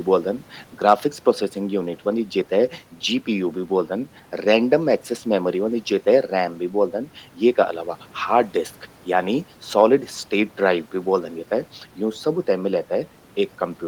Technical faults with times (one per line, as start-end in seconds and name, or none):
none